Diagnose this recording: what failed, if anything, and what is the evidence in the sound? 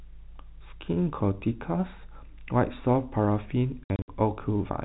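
The network stage failed: packet loss filled with silence. Between 3.84 and 4.08 s the speech is punched with hard-edged gaps totalling about 150 ms, the longest 60 ms. The gaps fit lost packets of roughly 30 ms that the receiver replaced with digital silence instead of concealing them. Because the holes are silence and their lengths are packet multiples, this is packet loss, not a level dropout or fade. Outside the gaps the sound stays band-limited below 4 kHz, as G.711 telephone coding would be.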